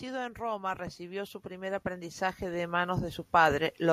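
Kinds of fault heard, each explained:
Automatic gain rising: the gain control in the capture chain judged the incoming level too low and began pushing its gain up, starting at about 0.37 s and continuing to the end of the clip. Over that stretch the level climbs by about 15 dB. Because the gain stage cannot tell speech from surroundings, the voice and the background noise swell together, and the gradual ramp reads as the whole recording drifting louder rather than the talker raising their voice.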